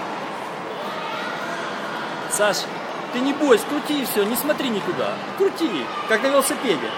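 At 2.89 s and again at 5.87 s the sound jumps forward, with a tiny slice, roughly 20 ms, gone and the two sides butted together. The even 3-second spacing points to audio missing between chunks, likely lost as one block closed and the next opened.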